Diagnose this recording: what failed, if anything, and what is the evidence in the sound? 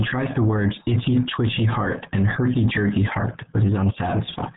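The codec stage is the culprit: the whole speech clip has been through the RealAudio 14.4 codec. Nothing above 3.8 kHz survives, and the voice comes out muffled and gargly throughout, which fits RealAudio 1 squeezing everything into roughly 8 kbit/s.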